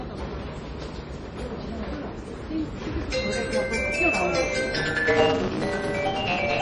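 The audio was likely encoded as MP3 at a very low bitrate, with a heavy loss of detail that fits something around 32 kbps. Short of bits, the encoder cut everything above 10.9 kHz and dropped weak frequency components, which flicker in and out from frame to frame. Throughout the clip the sound is dull and watery, with a swirling, metallic texture on bright, hissy parts and softened, smeared attacks.

From 4.74 s to the end, a block size mismatch (truncated) sets in. One stage hands over longer blocks than the next stage reads, and the tail of each block is discarded, which fits a 256-sample read. The regular cuts produce a buzz at 172 Hz, and because part of every block is skipped, the sound races ahead at 1.88 times normal speed while keeping roughly its original pitch.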